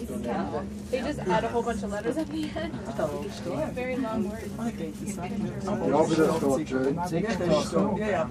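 No technical faults can be heard in the audio.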